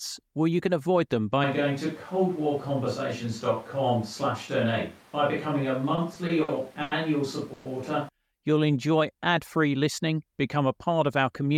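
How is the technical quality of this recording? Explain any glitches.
Not great. There's a stretch of distant-microphone sound plus a run of network-timing glitches near the end.

From 1.44 s to 8.09 s, right after "can avoid them by", there's a switch to a distant microphone. The voice suddenly goes roomy and hollow with thinner bass, though the level stays about the same and the background noise sits roughly 25 dB under the voice. Most likely the close mic dropped out and a farther one, like a camera's, took over.

Between 5.95 s and 6.93 s you get repeated stalls (stutter): five little hangs totalling 200 ms, the longest 90 ms. Packets were arriving late, so the jitter buffer kept running dry and the receiver stretched the last sound each time. Nothing's lost, but it drags and stutters.

At 7.53 to 7.67 s there's a call audio freeze: a 120 ms buzzy hold where the last sound is continued, with no silence. 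This is likely held-up packets emptying the jitter buffer. The audio then resumes where it stopped, 120 ms later.

From 8.44 s to 9.12 s, just before "ad free listening become", a jitter buffer slow-down kicks in. The receiver repeated tiny pitch-period slices to rebuild its reserve, adding 60 ms. Speech runs at about 92% speed with unchanged pitch, sounding slightly drawn out.

Finally, 11.09 to 11.50 s, right after "free listening become a", there's a jitter buffer speed-up. The buffer was overfull, so the receiver trimmed short pitch-period chunks, around 40 ms in all. The speech runs at roughly 107% speed with the same pitch and sounds a touch hurried.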